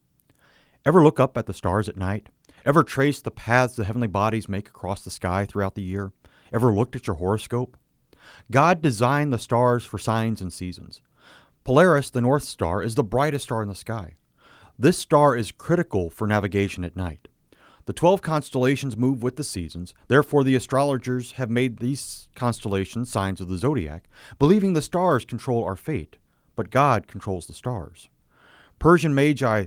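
Nothing goes wrong anywhere in this speech recording, so there's no technical fault to point out.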